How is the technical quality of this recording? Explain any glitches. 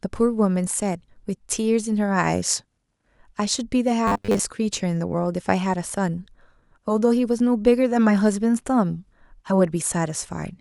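The recording has one glitch. From 4.07 to 4.39 s the speech turns robotic, with the sound of repeated short buffers. New audio likely arrived too late. A slice of about 10 ms was replayed over and over, filling most of that stretch. The repeats impose a metallic 100 Hz buzz that loosely follows the words.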